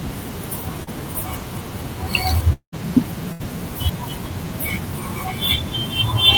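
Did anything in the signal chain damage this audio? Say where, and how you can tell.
Yes, the network side. At 0.83 to 0.89 s there's short concealed packet loss: about 40 ms went missing, and the decoder papered over it with a quick smeared continuation.

From 2.53 to 2.74 s the sound turns into a fading buzz or hiss, then about 90 ms of silence, with roughly 200 ms lost, likely a long network dropout.

At 3.32 to 3.42 s there's a burst of packet loss: about 80 ms gone, filled by a held, fading continuation before the audio picks up further on.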